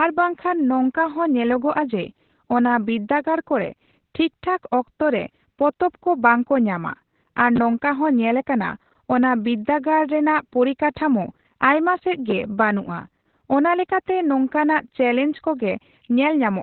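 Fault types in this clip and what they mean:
Opus voice compression: the speech runs through a low-rate linear-prediction voice coder, here around 8 kbps narrowband, so it sounds muffled, hoarse and slightly robotic. A spectrogram shows an empty band above about 4.2 kHz and a coarse, smeared texture below.
Chunks out of order: at 7.56 s a 10 ms slice plays one slot late, swapped with its neighbour, giving a brief jumbled blip. The waveform shows three abrupt discontinuities within 20 ms, and the spectrogram shows thin vertical lines there.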